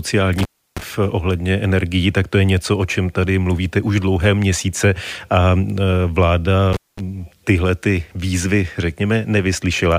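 At 0.38 s the speech drops out with a crackle, stays gone for about 0.32 s with only faint hiss, and crackles back in by 0.83 s. That's an intermittent contact, a loose plug or cable briefly opening the line. It happens again from 6.73 to 7.00 s, open for about 0.21 s, with the audio returning just before "tyhle ty výzvy", again with that scratchy edge on both sides of the gap.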